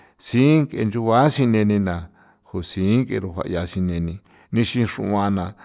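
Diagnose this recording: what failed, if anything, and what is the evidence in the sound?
Nothing failed here; listening to the speech, there's no glitch, dropout or distortion anywhere in the chain to point to.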